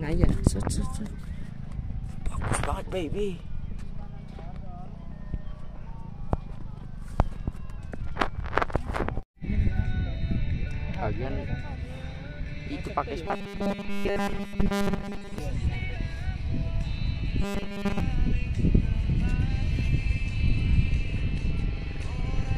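From 13.26 to 15.38 s, and again from 17.42 to 18.00 s, the sound turns into a rigid, metallic buzz pitched at 200 Hz: robotic sound from repeated short buffers. The likely cause is audio arriving too seldom, so a 5 ms slice is looped to fill the gaps. In the first stretch most of the time is repeated material. The second is looped throughout. A spectrogram shows evenly spaced 200 Hz harmonic lines, and the waveform shows identical short cycles.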